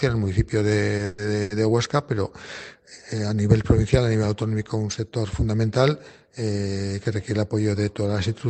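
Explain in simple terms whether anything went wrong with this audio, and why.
Around 0.97 s and again at 1.42 to 1.53 s there's a short stall from a late packet: the sound gets held a bit too long while the receiver waits, about 20 ms the first time and 80 ms the second. In between, from 1.05 to 1.21 s, you hear a call audio freeze: the last sound is stretched into a fading buzz for about 130 ms, likely because packets got held up on the way. In both cases the audio then picks up where it left off, so nothing is lost; everything after that point just arrives a little later.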